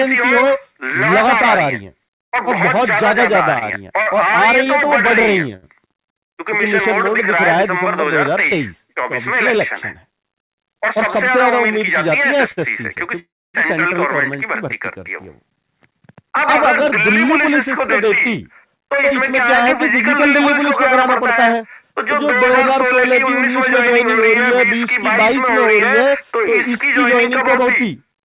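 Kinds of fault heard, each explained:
Repeated stalls (stutter): Packets kept showing up late, so the jitter buffer kept draining and the receiver had to pad each hole by carrying the last bit of sound on. Between 3.54 and 4.68 s there are four of these little gaps, 89 ms padded in total, the longest 37 ms. Nothing actually goes missing, but that stretch drags and hiccups.
Short stall from a late packet: A single packet wasn't there on time, the buffer ran dry, and the receiver stretched the last sound until the packet arrived, then picked up exactly where it left off. It happens at 5.56 s, held for 64 ms, and at 12.52 s, held for 53 ms. You get a sound hanging on a touch too long, with a faint buzzy or dipping quality, and no content lost.
Jitter buffer speed-up: After delayed packets bunch up, the buffer holds more than it wants, so the receiver trims out tiny pitch-period-sized slices over and over to cut the delay. 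Pitch stays put while the pace quickens: 103% from 10.51 to 11.69 s, shaving around fifty milliseconds; 103% again over the long stretch from 15.66 to 25.31 s, roughly 300 ms in all; and 107% from 27.28 to 28.03 s, about 70 ms, where it sounds a bit rushed.
Call audio freeze: At 13.19 s the sound stops moving forward for 348 ms. A short buzzy continuation of the last sound fades into about 270 ms of silence, and then the audio resumes from the point where it stalled, so a gap has been inserted rather than anything dropped. The likely cause is packets held up in transit long enough for the jitter buffer to empty completely. The narrow call-path bandwidth, with nothing above 4 kHz, is audible here too.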